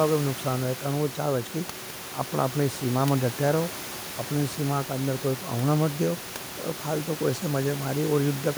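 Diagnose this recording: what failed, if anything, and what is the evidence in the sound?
Nothing failed; room noise sits about 15 dB below the speech.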